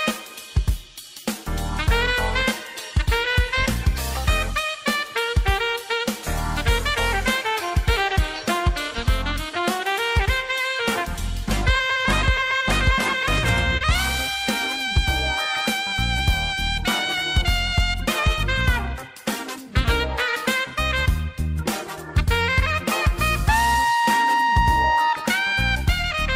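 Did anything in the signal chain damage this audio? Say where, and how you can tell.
Yes, at the network stage: there is a short concealed packet loss at 13.77 s, running to about 13.82 s. A packet arrived too late or not at all, leaving roughly 20 ms of audio missing. The receiver's concealment covered the gap with about 29 ms of synthesised signal, extending the preceding sound's pitch or noise character before crossfading back to real audio. You hear this as a brief smear or wobble, and a short transient there can drop out.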